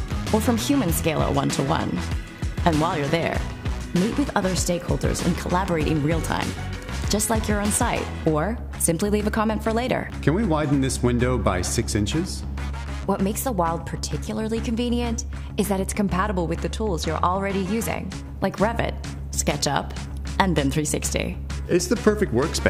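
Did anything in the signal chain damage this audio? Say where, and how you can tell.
Yes. Channel delay (comb filtering) from 16.75 to 17.75 s: the top end goes dull for that second. One channel lags by roughly one sample, about 0.02 ms, so the mono sum cancels near 20 kHz. That points to a driver or buffer misalignment.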